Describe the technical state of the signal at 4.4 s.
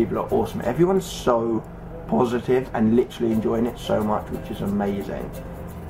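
At 4.4 s the signal is intact, with no fault audible at that point.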